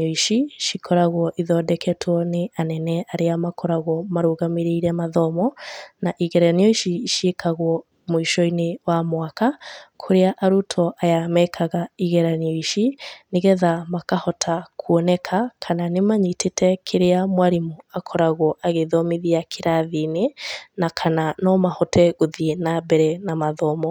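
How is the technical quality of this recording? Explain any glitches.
No glitches can be heard anywhere in the recording, and the speech signal stays continuous and intact throughout.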